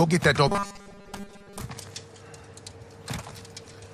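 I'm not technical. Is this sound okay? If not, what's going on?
No. From 0.48 to 1.61 s there is robotic sound from repeated short buffers: a steady metallic buzz at 200 Hz, likely from tiny 5 ms snippets replaying instead of new audio. Unlike a dropout, it never goes silent.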